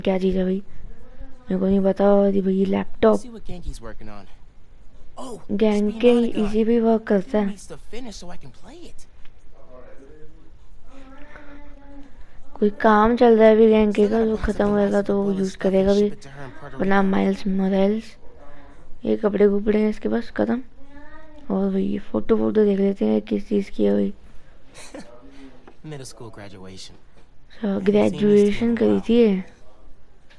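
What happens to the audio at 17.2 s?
Nothing goes wrong at 17.2 s; the audio there plays through intact, with no dropout, glitch or distortion.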